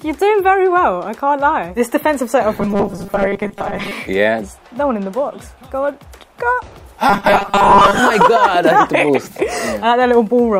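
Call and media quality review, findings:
Robotic sound from repeated short buffers, 2.55–3.92 s and 7.09–7.99 s: fixed 200 Hz buzz, likely a 5 ms buffer replayed on underrun. Steady pitch, no silent gaps.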